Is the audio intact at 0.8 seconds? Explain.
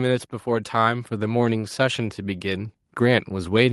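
No. At 0.8 seconds the speech is inside an automatic gain rise running from 0.44 s to the end of the clip: the gain control judged the input too quiet and kept raising its level, so voice and background swell together. The waveform envelope widens steadily, and the spectrogram brightens uniformly across all frequencies.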